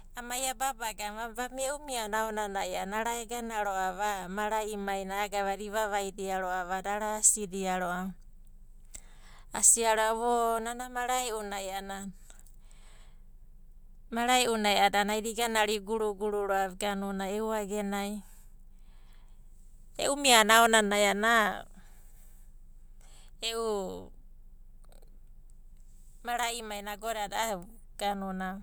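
Speech, with no technical faults to be heard anywhere in the recording.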